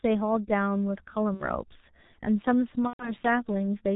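Speech passed through a G.723.1 codec at a rate that fits its 6.3 kbit/s mode. The heavy coding strips everything above 4 kHz and tracks the voice model in coarse 30 ms steps, so the speech sounds muffled and hoarse, with smeared consonants. VoIP packet loss concealed by the speech codec then breaks it twice. At 1.34–1.49 s a gap consistent with two lost frames, about 60 ms, is bridged by the decoder extrapolating its last pitch and filter. At 2.87–3.12 s a longer gap, about 120 ms, fits four lost frames. Each turns into a buzzy tone or coloured noise that fades, and the voice stays weak or distorted briefly after the packets resume.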